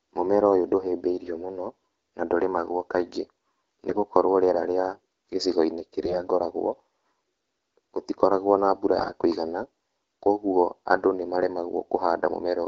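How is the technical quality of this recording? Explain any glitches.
The recording is marred by three short bursts of AMR bit errors in speech carried over the AMR wideband (HD Voice) codec, which sounds like its clear 12.65 kbit/s mode. The bursts fall at 3.90–4.00 s just before "rĩera rĩa", at 6.02–6.22 s, and at 8.98–9.12 s right after "gũtikoragwo na mbura". Each spans only a few codec frames.

Flipped low-priority bits, at a rate of several percent, slip past the frame checksum. The excitation pulses then land wrongly and the fine pitch, gain and spectral values go astray, so the voice turns hoarse and gargly. Unlike packet loss, pitch and loudness hold steady and nothing drops out or goes silent.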